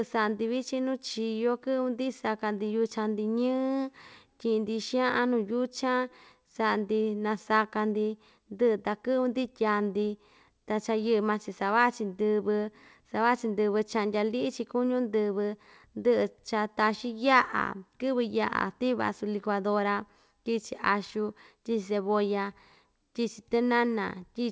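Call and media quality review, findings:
No faults found in this speech clip. The call path sounds like a wideband G.722 link, with nothing above 8 kHz, consistent with a 64 kbps stream.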